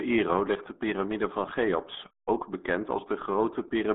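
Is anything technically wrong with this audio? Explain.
Yes. Throughout, the speech sounds muffled and gargly, with nothing above about 3.8 kHz, the signature of the RealAudio 14.4 codec. Its heavy compression, consistent with roughly 8 kbit/s, keeps only a narrow telephone-like band.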